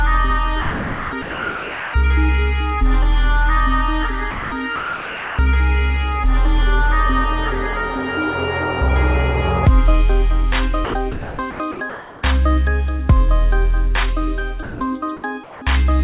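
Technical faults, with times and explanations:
0.62–1.94 s, 4.31–5.39 s, 10.85–12.23 s: sound chopped by the voice detector. The sender's detector likely toggled transmission repeatedly, so about 1.23 s, 0.84 s and 0.87 s of sound became choppy synthetic fill.
14.63–14.81 s: sound dropped by the voice detector. Quiet sound was likely misjudged as background and not sent, so 180 ms gives way to steady noise before returning.
15.44–15.62 s: comfort noise in place of the background. Transmission likely paused, and the receiver's featureless synthetic noise replaced the real background for 180 ms, about 5 dB quieter.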